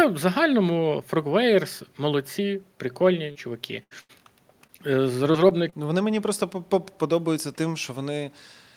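From 3.31 to 3.37 s, about 40 ms of audio arrived too late to decode, a short concealed packet loss. The receiver stretched the preceding sound across the hole and then blended back, leaving a brief smear in the speech.

At 3.83 to 3.93 s and again at 4.01 to 4.11 s, a burst of packet loss removed about 80 ms each time. The decoder prolonged the last sound while fading it, so each gap comes out as a held buzz or hiss before the speech jumps ahead.

Two more short concealed packet losses follow, 4.67 to 4.71 s and 4.77 to 4.80 s, each about 20 ms. These are patched the same way and are heard as quick wobbles.

Between 5.32 and 5.74 s, repeated packet loss opens four holes, the longest 25 ms, with about 14% of that span filled in. The fills come close together, making the speech choppy with pieces missing.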